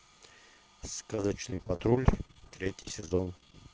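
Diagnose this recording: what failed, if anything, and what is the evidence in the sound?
Repeated packet loss (robotic sound) runs from 1.15 to 3.55 s at the network stage. Dozens of short holes, none longer than 35 ms, are patched by stretching the previous sound. Over a quarter of that span is synthetic fill, so the speech turns choppy and robotic.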